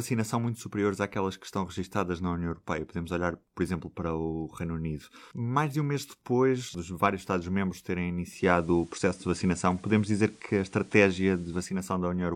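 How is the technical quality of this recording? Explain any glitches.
Around 8.24 s a faint hiss appears well below the speech. The level shifts by about 4 dB, until it returns at 11.80 s. This is digital radio blending to analogue: the receiver lost its digital stream and cross-faded, over roughly a quarter second (244 ms), to the station's FM broadcast. FM's background noise accounts for the hissier stretch, and it blended back once the digital signal recovered.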